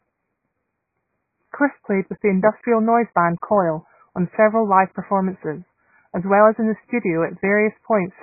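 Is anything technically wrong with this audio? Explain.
Yes. Throughout, the speech sounds dull, smeared and warbly, with nothing above 2.5 kHz, which is likely heavy AAC compression at a very low bitrate discarding the upper spectrum.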